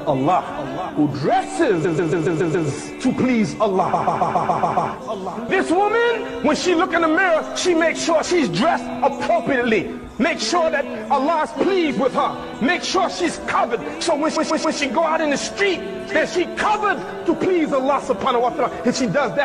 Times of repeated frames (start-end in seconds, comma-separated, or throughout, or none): 1.84-2.67, 3.93-4.90, 14.35-14.77